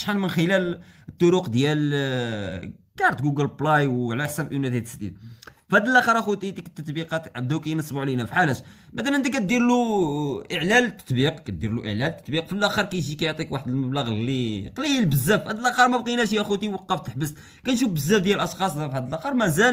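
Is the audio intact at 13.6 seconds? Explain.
Yes, the audio is intact at 13.6 seconds, with nothing there to suggest a dropout, glitch or other fault.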